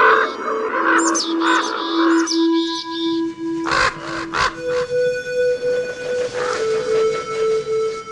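Nothing in this music clip stands out as a technical fault, so there's nothing here to flag.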